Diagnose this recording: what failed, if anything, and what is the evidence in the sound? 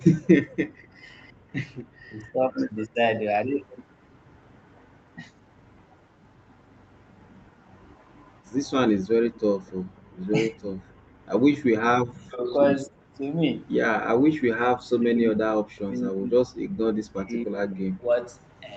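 Echo leak in the call processing: a faint copy trailing 257 ms behind, around 30 to 35 dB down, from 0 to 1.84 s and 2.82 to 9.71 s. Likely residual echo the canceller missed.

Background gated by the echo canceller: the room sound dips about 21 dB at 1.34 to 1.47 s and about 38 dB at 10.0 to 10.14 s, while the canceller clamps the mic.

Speech suppressed in double talk: the voice sinks up to roughly 40 dB in patches at 2.09 to 2.97 s, 10.5 to 12.99 s and 14.16 to 18.19 s. That's likely the canceller ducking both talkers.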